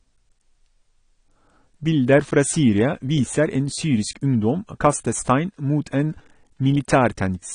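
From start to finish the speech sounds dull and smeared, with nothing above about 9.9 kHz and a watery, fizzy edge on sibilants. That's likely AAC compression, AAC-LC at a low bitrate, something like 32 kbps, cutting the top off and coarsely quantising what's left.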